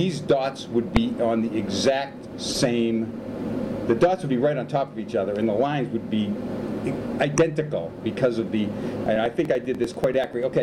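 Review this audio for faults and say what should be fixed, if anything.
Corrupt frame decoded shows up four times: quick blips at 0.96 s, 4.67 s and 7.37 s, and a longer burst from 2.50 to 2.57 s. Flipped bits in a few compressed frames got decoded anyway, so energy landed at the wrong frequencies. Adding checksums or error detection on the stream would let the decoder conceal bad frames instead of playing them.

Periodic USB or driver dropouts run from 9.06 to 10.53 s: about fifteen regular ticks, one every 98 ms. Each time, roughly 2 ms of audio is skipped outright because something stalls the bus or driver on a fixed schedule. Tracking down that background task, or giving the audio path a bigger buffer, should stop it.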